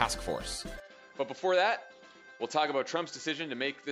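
An input switched to a poorer device, likely, at 0.8 s, lasting to the end. From that moment the sound drops by around 10 dB and loses everything above 7.6 kHz, so it turns duller and narrower, with no silence at the changeover. A faint new background noise also appears, sitting far below the signal. A sudden, sustained shift in bandwidth, level and noise together points to the recording moving to a different, lesser microphone or input path.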